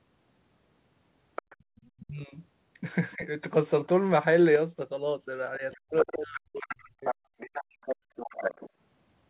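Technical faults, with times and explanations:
1.36–1.9 s, 3.11–3.15 s and 5.71–8.7 s: other side's voice leaking through. The echo canceller likely left part of the loudspeaker signal in the microphone feed. A second voice sits under the talker, about 15 dB down at first, faint at 3.11 s, then only about 10 dB down.
1.56–1.72 s and 7.97–8.16 s: background gated by the echo canceller. While the loudspeaker played, the canceller clamped the microphone hard. The room sound falls away by about 32 dB, then about 34 dB, for a fraction of a second each time, and comes back when it releases.
2.0–2.35 s, 3.15–3.25 s and 5.59–7.69 s: speech suppressed in double talk. With both sides talking, the canceller likely could not separate the near voice from the echo and pulled everything down. The talker dips about 20 dB, then 15 dB, then up to about 40 dB across much of the long final stretch.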